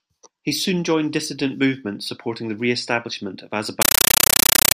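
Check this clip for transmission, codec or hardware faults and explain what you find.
One fault, from 3.82 s to the end: a compressed stream played as audio. An undecoded AC-3 bitstream is read as samples, so each frame becomes a 9.33 ms noise burst then silence, repeating 31.25 times a second: very loud, chattering static replacing the speech.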